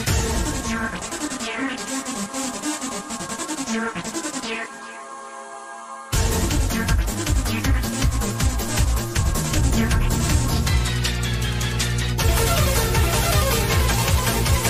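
From 9.51 s to the end, mains hum appears: a steady 60 Hz tone with some low harmonics, about as loud as the sound itself, from power-line coupling such as a ground loop. Unlike rumble, its pitch is fixed and constant rather than broadband.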